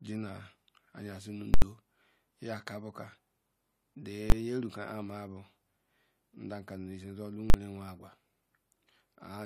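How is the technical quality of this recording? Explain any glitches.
The speech is marred by three invalid numbers at full scale faults, at 1.54–1.62 s, 4.30–4.32 s and 7.50–7.54 s. A calculation went infinite, pinning output at one extreme value for 80, 20 and 40 ms. Each lands as a very loud pop at its start and end with no sound between, or as one bang where the block is short.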